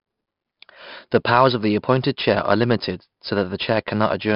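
From start to finish the speech carries 4-bit ADPCM compression, heavily damaged. Each sample is coded as a coarse step from a prediction, so a gritty hiss rides on every loud syllable and sharp onsets crack where the step size lags. Nothing reaches above 5.3 kHz, which dulls the sound and fits a rate near 44 kbps. Unlike transform-codec damage, there is no swirling or warbling, and unlike fixed quantisation noise, the hiss rises and falls with the speech.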